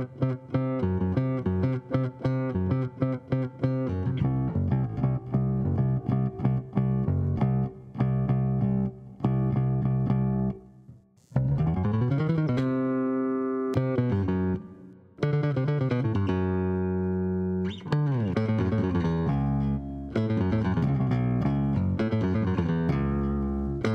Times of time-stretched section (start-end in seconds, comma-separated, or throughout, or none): 9.62-12.68